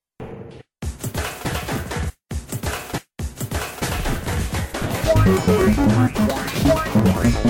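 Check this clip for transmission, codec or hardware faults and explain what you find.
The music has periodic USB or driver dropouts from 5.50 s to 7.34 s. About fifteen times, every 0.115 s, a short stall in the USB bus or audio driver drops roughly 10 ms of audio. The stream skips ahead rather than filling with silence, so the music jumps forward slightly each time, giving a steady ticking at about nine per second. A waveform would show abrupt discontinuities with no flat gaps. A spectrogram would show thin, evenly spaced vertical broadband lines.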